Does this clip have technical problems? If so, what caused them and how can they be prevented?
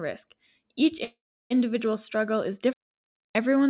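Yes. From 1.04 to 1.52 s the speech stalls in what sounds like a call audio freeze, likely caused by packets arriving late so the jitter buffer ran dry. The last sound is stretched into a fading buzz for a moment, then about 330 ms of near silence, roughly 460 ms in all. Nothing is lost: the speech resumes where it stopped, only later. That delay, and the decaying tail rather than an abrupt cut, separates it from a dropout. A larger or adaptive jitter buffer and a more stable network route would prevent it.

From 2.73 to 3.35 s there is a digital wireless dropout: the receiver lost too much data and muted with a very short fade, leaving a clean hole of near silence lasting about 620 ms. Unlike the freeze, no prior sound is held over into the gap, there is no noise burst on either side, and the speech carries on at its original timing, so whatever fell in the hole is missing. Keeping the transmitter within range and line of sight, on a clear channel, would prevent it. 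The whole clip also sits on a narrowband call path with nothing above 4 kHz, as expected of 64 kbps G.711 mu-law.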